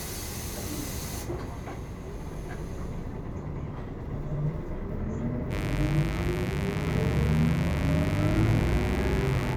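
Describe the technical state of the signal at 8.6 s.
A steady, raspy buzz sits fairly loud under the sound at 8.6 s. This is mains buzz, running from 5.49 s to the end. Sharp switching spikes twice per 50 Hz cycle leak in, spreading harmonics up to several kHz.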